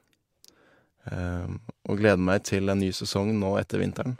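Listening through the speech, nothing stood out as a technical fault at any point.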